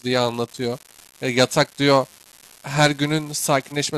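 A speech recording with an unreliable data bit running through its whole length. One line in the digital path is marginal. Its bit flips in a random share of samples. Each wrong sample jumps by the same fixed step, at about -23 dBFS. The result is a steady crackle, like a fine fizz laid over everything. It does not follow the speech. It carries straight through the pauses too, which marks it as a data fault.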